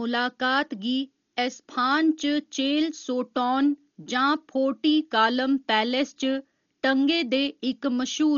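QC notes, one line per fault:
Throughout: Dolby Digital compression, heavy. The speech is dull, with nothing above 6.9 kHz, and rough fluttering noise sits around tonal parts. This points to a starved AC-3-style encoder, likely near 40 kbps, leaving many frequency lines without mantissa bits, filled with dither noise.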